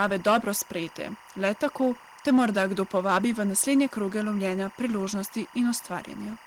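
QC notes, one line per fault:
Throughout: timecode bleed, a square-wave code at 24 frames per second flipping between roughly 1 and 2 kHz, leaks in about 20 dB under the speech as a steady chirping warble.
0.00–0.50 s and 2.27–3.83 s, just before "kroge lovljenja": hard clipping, with peaks driven about 8 dB then 6 dB past full scale, cut flat with added upper harmonics.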